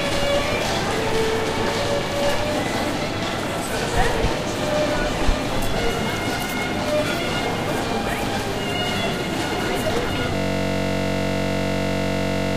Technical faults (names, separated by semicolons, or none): system hang loop